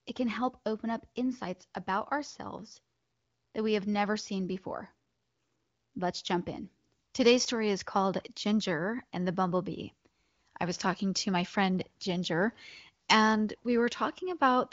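No technical faults can be heard in this speech. It has passed through the AMR wideband (HD Voice) codec, and nothing is heard above about 7.6 kHz, while the clear, unroughened speech points to one of the higher AMR-WB rates.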